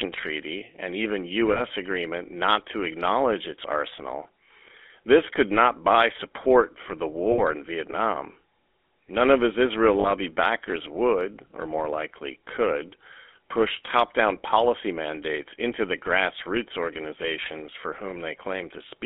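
From start to finish the speech has that buzzy, gravelly edge of the GSM full-rate codec, which fits a 13 kbps stream. The codec rebuilds the voice from a vocal-tract model fed by a coarsely sampled pulse train, and here the damage is plainly audible. The line band runs from about 250 Hz to 3.5 kHz, so it sounds thin, with no low body and nothing bright on top.

There are three spots of lost GSM frames. At 1.52 s, between "and even" and "agreement not to acknowledge", a 40 ms gap (which points to two frames) gets filled by replaying the last good frame, so you hear a short, rough, metallic ring. At 7.32 s, just after "buy support for the", a longer 60 ms stretch, probably three frames, does the same thing. At 10.0 s, right before "backers would or more", there's another 40 ms smear.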